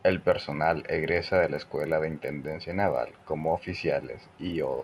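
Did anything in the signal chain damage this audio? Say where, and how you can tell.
Yes. The resampler restarted on every block somewhere in the driver or buffer path, and you can hear a 25 Hz buzz riding on the speech throughout. Each 40 ms block was converted from 24 kHz to 48 kHz on its own, so every block edge carries a small error.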